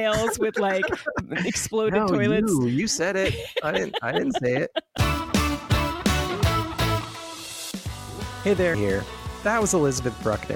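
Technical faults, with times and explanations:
1.19–1.21 s, 4.97 s and 8.73 s: damaged data in a compressed stream. Corrupted bytes make the decoder misread frames, lose sync and hunt for the next frame header, producing brief glitches lasting at most 20 ms.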